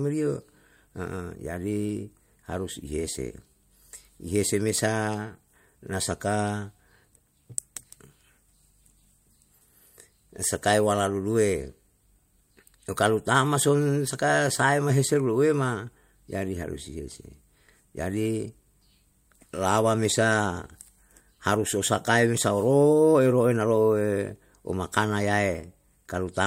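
No technical faults can be heard in this speech recording.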